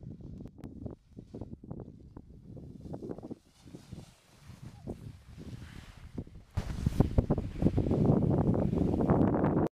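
The audio drops abruptly by about 12 dB from 0.48 to 0.64 s, then jumps up about 13 dB at 6.57 s until the end; a sudden gain jump, likely an unramped gain change.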